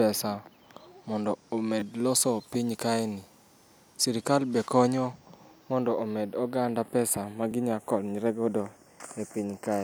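Throughout the speech, the channels drift apart by a fraction of a millisecond, about 20 ppm clock error, giving slow flanging. A spectrogram of the mono sum shows comb notches slowly sweeping.

At 1.80 to 1.82 s a repeated buffer occurs. One short slice, consistent with a 10 ms buffer, plays three times with hard joins, giving a brief buzz. The waveform shows identical repeating cycles.

At 7.51 s another 10 ms slice plays twice, causing a click. Each hard join appears as a vertical line on a spectrogram.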